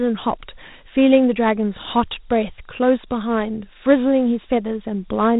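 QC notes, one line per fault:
throughout Dialogic VOX ADPCM: the speech band stops at 3.8 kHz, and a plainly audible gritty hiss rides on the speech. Coarse 4-bit adaptive steps track the waveform loosely, leaving granular quantisation noise, which fits a 32 kbps telephone-grade stream.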